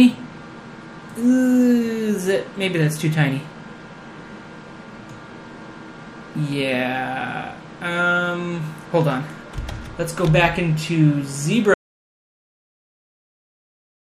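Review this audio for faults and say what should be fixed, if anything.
Audio dropout to silence from 11.74 s to the end, likely a lost input while recording continued. The waveform goes flat and the spectrogram turns blank, with no room tone. Securing connections and checking mute states and input meters during recording would prevent this.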